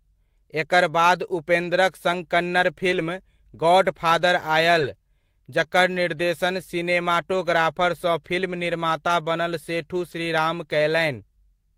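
At 1.63 s, then 2.91 to 3.01 s, 4.79 to 4.89 s, 7.33 s, 9.07 s and 10.11 s, the speech briefly turns rough and noisy with no gap. Each is a lost packet rebuilt from error correction: the following packet carried a low-bitrate copy that the decoder played instead. The short events last 20 ms, fitting one packet, and the two longer ones last 60 ms, fitting three. Unlike concealment, there is no dropout or smeared, repeated tail.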